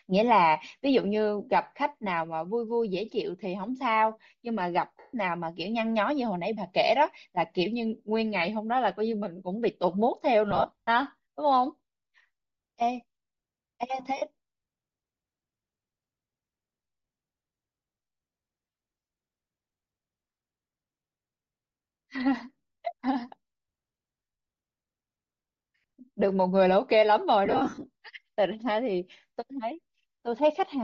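Bluetooth LC3 compression is the likely cause of the plainly audible damage running through the whole speech clip. The upper spectrum sounds thinned and partly replaced by noise fill, giving the speech a breathy, grainy edge. That treatment, together with the density of the artefacts, points to LC3 working at around 32 kbps with 7.5 ms frames, where too few bits remain to code the high bands faithfully.

Lost LE Audio frames break up the speech six times. The decoder hides each gap by repeating the last spectrum with scrambled phase, so the speech smears into a hiss-like blur, fading away toward silence when a gap runs long. The dropouts fall at 4.99 to 5.14 s, a solid run of about 140 ms; 10.51 to 10.88 s, scattered across 360 ms with the longest run around 50 ms; 14.16 to 14.22 s, about 50 ms; 18.65 to 18.74 s, scattered across 90 ms with the longest run around 30 ms; 24.33 to 24.39 s, about 70 ms; and 27.46 to 27.86 s, scattered across roughly 400 ms with the longest run around 50 ms.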